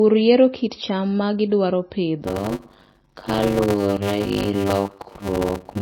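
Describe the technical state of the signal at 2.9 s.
At 2.9 s the signal carries a block size mismatch (padded), which begins at 2.22 s, right after "kit cham ma gidwaro", and lasts to the end. Each short block is topped up with silence before the next stage reads it, which fits 256-sample blocks read as blocks of about 480. The result is a 100 Hz buzz and speech slowed to 0.53 times its speed at roughly normal pitch. A waveform shows near-silent gaps every 10 ms, and a spectrogram shows regular vertical gaps.

MP3 compression is also present at this point. It sounds watery and swirly, and is likely from a low bitrate around 24 kbps. On a spectrogram this appears as speckled, flickering holes.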